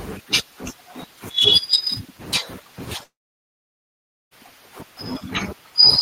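At 3.03 s the speech gives way to a short, fading buzz, then near-silence until 4.34 s, when it resumes with about 1.3 s missing. This is likely a long network dropout: no audio arrived, so the receiver briefly extended the last sound before falling silent.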